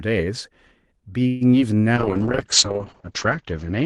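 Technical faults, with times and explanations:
1.27 to 1.43 s, call audio freeze: the sound stalls and the last moment is stretched into a fading buzz for about 135 ms, then carries on from exactly where it stopped, so nothing is lost and everything after is pushed later by the same amount. That points to late packets and an empty jitter buffer as the likely cause. Unlike packet loss, it is a held pause that inserts time rather than a smear replacing missing audio.
1.51 to 1.54 s, short concealed packet loss: a brief smear lasting a few hundredths of a second, where roughly 20 ms of the real signal never reached the decoder in time. The receiver extended the preceding sound to cover the gap and then blended back into the real audio. Unlike the freeze, nothing is delayed. The original material in that slot is simply gone, replaced by a guessed continuation, so it reads as a quick wobble rather than a stall.
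1.97 s to the end, call bitrate drop: from this point the sound turns rough and watery and loses its top end. The band limit narrows from 12 kHz to 8 kHz, and the coarseness points to the encoder falling from around 32 kbps to around 7 kbps, staying at its lowest for about 1.2 s. This is a sustained change in quality that lasts to the end of the clip, not a momentary glitch. The dulled highs separate it from the codec's normal light coding noise earlier in the clip.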